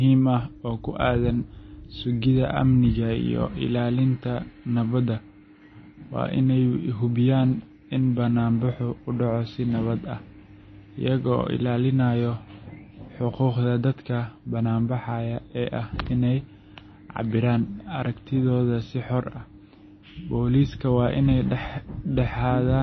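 Throughout the speech, the sound is plainly watery and swirly. Attacks are smeared and nothing is heard above 6.1 kHz. The likely cause is MP3 compression starved of bits, fitting a bitrate near 24 kbps, so weak frequency lines flicker on and off between frames.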